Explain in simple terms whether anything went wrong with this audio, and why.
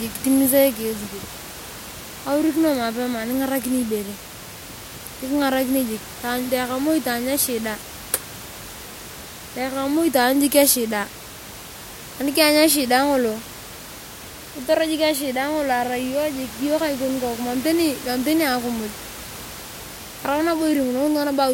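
Nothing went wrong: the only sound besides the speech is the room's own background noise, sitting well below the speech, and that belongs to the recording, not to any fault in the system.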